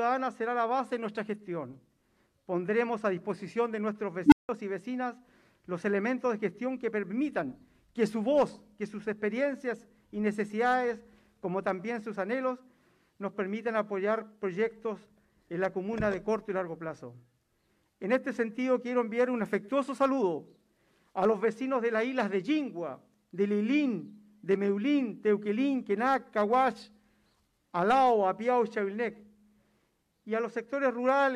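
At 4.26 s an unstable filter takes over the signal. A recursive filter stage starts feeding back on itself, so a low tone of around 300 Hz rises out of the sound and swells very loud in about 60 ms, hard-clipping as it climbs. Then the filter's internal values overflow and the output drops out, leaving about 170 ms of silence before the filter resets and the audio returns at 4.49 s.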